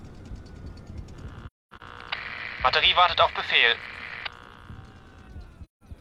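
At 1.47 to 1.82 s and again at 5.64 to 5.83 s, AAC frame loss with muting leaves soft-faded silent holes rather than clicking hard cuts, because zeroed frames still crossfade through overlapping windows.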